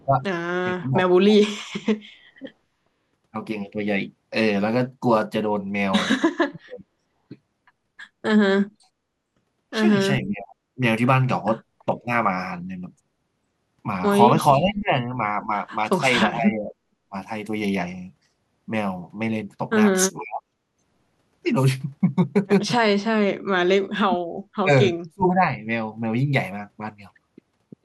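The speech dips and breaks up in bursts at 0–2.4 s, 6.47–6.93 s, 10.22–10.78 s, 11.97–12.09 s, 14.54–17.15 s, 20.17–20.56 s and 23.8–25.42 s. Drops reach roughly 20 to 40 dB. This is likely speech suppressed in double talk. The echo canceller mistook the talker for loudspeaker echo and cut both. At 7.21–7.29 s the background is gated by the echo canceller. The room sound drops about 11 dB for a moment, then returns.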